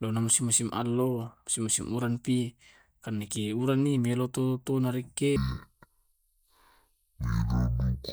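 From 5.36 s to the end at 8.13 s, the speech suddenly drags at half speed and drops a full octave, 12 semitones lower. This is stereo read as mono: the left and right samples are played in turn as one channel, doubling the playback time.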